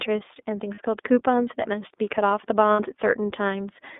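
From the very start the whole thing runs through the iLBC codec, and you can plainly hear it. The band is squeezed to roughly 250 Hz to 3.6 kHz, so there's no low body and no air on top. The speech stays intelligible but has that slightly rough, synthetic edge from coding each frame's excitation on its own, and the grain fits iLBC's 13.33 kbps mode with its 30 ms frames.

At 0.75 s there's a short patch of lost iLBC frames, about 30 ms, running to 0.79 s. The decoder had nothing for that stretch, so it repeated the last pitch cycle with some noise mixed in, which comes across as a brief held, faintly buzzy vowel. At 2.73 s it happens again, longer this time at about 60 ms, ending at 2.80 s. Both times the speech snaps straight back, because each iLBC frame decodes without needing the one before it.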